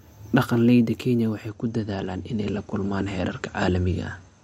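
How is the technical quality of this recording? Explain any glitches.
The quality drops partway through. From 1.49 s to the end, the adaptive stream switches to a lower bitrate, consistent with MP3 falling from 128 to 48 kbit/s. The top end abruptly thins with no gap, and a spectrogram shows everything above 11.1 kHz suddenly cut off.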